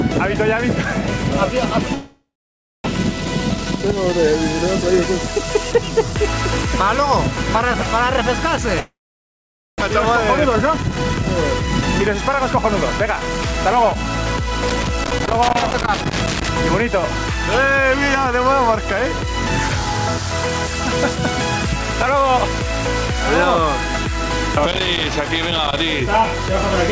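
At 1.94 s the sound smears into a decaying buzz, then goes silent for about 0.6 s before resuming at 2.88 s with a piece missing. This is most likely a long network dropout, with the receiver concealing lost packets until nothing remained to extend. The same thing happens from 8.80 to 9.84 s, with about 0.86 s of silence.

After each gap the jitter buffer speeds up to drain the backlog. It trims short pitch-period slices so playback runs fast without changing pitch. The rate is 117% from 2.96 to 4.13 s and 107% from 4.82 to 6.14 s. From 9.87 to 13.96 s it is 109%, removing roughly 0.4 s in total. These stretches sound hurried.

Loose connector crackle appears from 14.69 to 16.49 s and from 24.71 to 25.82 s. These are irregular scratchy bursts where an intermittent contact chops the signal. Throughout, nothing is present above 8 kHz, which fits the G.722 call codec at 64 kbps.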